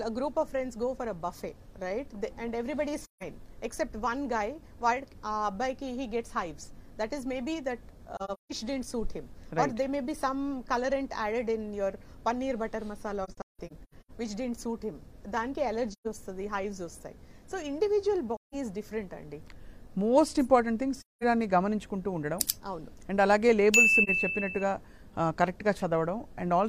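AAC frame loss with muting occurs at 3.01–3.23 s, 8.16–8.52 s, 13.24–14.11 s, 15.92–16.07 s, 18.35–18.55 s, 21.00–21.24 s and 24.03–24.10 s. Lost frames were decoded as silence. The windows still fade the sound out and back in, so each multi-frame gap is a soft-edged hole and the single lost frame at 24.0 s a brief dip, unlike a hard dropout. The 8.2 s and 13.2 s events break into several short holes, some runs near 0.15 s. Steps of about 43 ms fit AAC frames.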